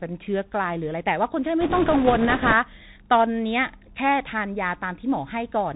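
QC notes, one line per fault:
Throughout: Bluetooth CVSD headset codec. Everything above 4 kHz is gone, so the speech sounds narrow and boxy. A one-bit delta coder tracks the waveform with an adapting step. Loud high sounds outrun it. S sounds turn scratchy over a granular hiss. This fits a 64 kbps CVSD link.
1.61 to 2.53 s: bit errors on a Bluetooth voice link. A rushing, crackly noise rides over the speech for almost a second. Each flipped bit nudges the waveform only slightly, and the error fades fast. So there are no loud clicks. The density points to an error rate of a few percent.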